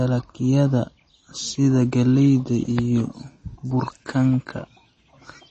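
Speech throughout, with plainly audible MP3 compression: nothing reaches above 8.3 kHz, and the sibilants take on a watery, swirling quality as weak frequency lines drop in and out between frames. The likely cause is a starved encoder, consistent with roughly 32 kbps.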